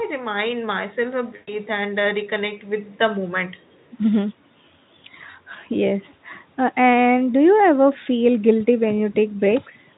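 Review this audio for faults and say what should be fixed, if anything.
VoIP packet loss concealed by the speech codec, from 1.35 to 1.56 s: for about 120 ms the speech decoder had no new data, so it kept repeating its last pitch and spectral shape while lowering the gain frame by frame. The speech turns into a stretched, buzzy tone or coloured noise that fades, which fits a run of six 20 ms frames. Because each frame builds on the previous one, the speech stays weak or distorted for a short while after the gap, before the Speex speech returns to its clean sound. To prevent it, reduce network loss and add a jitter buffer or forward error correction so the decoder gets redundant data to rebuild lost frames.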